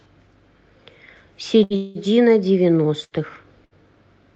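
At 1.63 to 1.73 s there's a burst of packet loss. About 60 ms of speech goes missing, and the receiver stretches the last sound into a short held, fading tail before jumping ahead. Right after, from 1.76 to 1.98 s, the sound hangs and fades for about 190 ms, then carries on with nothing skipped. That's likely a call audio freeze, with delayed packets letting the jitter buffer run dry. The same packet-loss skip, again about 60 ms lost, comes back at 3.04 to 3.14 s and 3.65 to 3.74 s.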